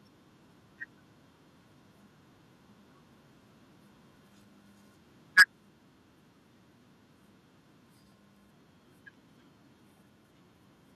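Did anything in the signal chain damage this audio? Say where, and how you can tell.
Yes. Between 5.38 and 5.43 s the loudest peak turns harsh and crackly, which points to microphone overload at the converter stage, likely from an input volume set too high for this talker. The signal tried to go about 14 dB past full scale, so a large share of samples in that stretch, roughly two in five, sit flat at the ceiling. On a waveform the peaks look squared off. A spectrogram shows a bright vertical smear of broadband distortion there.

At 5.39 s, right inside that overloaded peak, the whole level drops by about 2 dB in a single step, voice and background together, and stays lower afterwards. That is the microphone volume being stepped down, most plausibly by the call processing reacting to the clipping and lowering the device's input volume once. On a waveform the envelope shows a small abrupt shelf rather than a gradual fade. 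A spectrogram shows every band dimming together at that instant, with no change in spectral shape.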